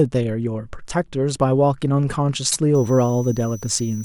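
A short speech recording carries two faults. Around 2.51 to 2.57 s, a block of compressed audio was delivered twice, which fits a pair of frames, so the decoder replays a 48 ms slice once more. The result is a brief repeated frames stutter, lengthening the audio by 48 ms. From 2.75 s to the end, a switching power supply leaks into the signal as a switching supply whistle. It is a thin high tone wandering between 5.85 and 6.01 kHz, sitting about 25 dB below the speech.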